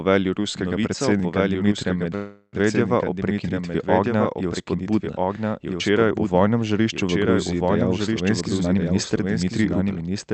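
Throughout the speech, a doubled audio track trails the original by roughly one and a half seconds at about 5 dB lower. It is a dry, full-band copy with no room colour, so it is not an echo, and a late second capture path is the likely cause.

From 2.15 to 2.55 s there is a call audio freeze. The last sound is stretched into a fading buzz or hiss with a brief silence, and then speech resumes at "o prekinitvi ognja je". Nothing is lost; it is likely that delayed packets inserted a 375 ms gap.

Between 8.28 and 9.98 s, a jitter buffer speed-up trims about 0.4 s of pitch periods, so the speech runs 121% fast at unchanged pitch, unlike a resampling error, which would also raise the pitch. The 8 kHz call bandwidth is audible in this section as well.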